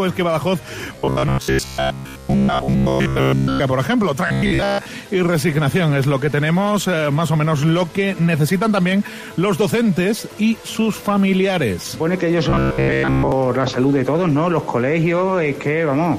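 From 0.93 to 3.61 s, 4.27 to 4.86 s and 12.50 to 13.32 s, the sound turns into a rigid, metallic buzz at 66.7 Hz that only loosely follows the original. This is robotic sound from repeated short buffers. The likely cause is input arriving too seldom, so the output loops its last fragment of about 15 ms. In these stretches, most of the audio is repeated material rather than new signal.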